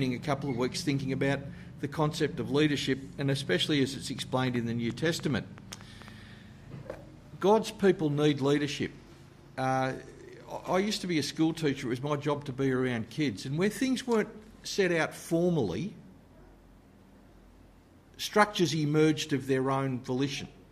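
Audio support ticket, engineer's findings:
Train of clicks, 4.19 to 6.09 s. About ten sharp, similar-shaped ticks at roughly 5.8 per second, unevenly spaced, peaking a few dB above the sound and audible in gaps too. Likely interference pulses from nearby equipment or an unstable interface injecting transients into the signal path.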